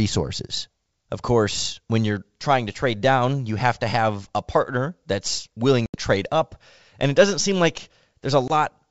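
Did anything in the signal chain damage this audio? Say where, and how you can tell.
Yes. The speech drops to hard-edged silence twice, at 5.86 to 5.97 s and again at 8.48 to 8.51 s, and each time resumes slightly distorted before settling. This is packet loss on an ADPCM call, a network-stage fault. Roughly 80 ms of audio went missing in the first gap, which fits about four lost packets, and 20 ms in the second. Because ADPCM codes only differences, the receiver's predictor and step size lose sync with the sender's during each gap, causing the rough restart. The G.722 wideband coding carrying the call is audible as clear audio up to 7 kHz.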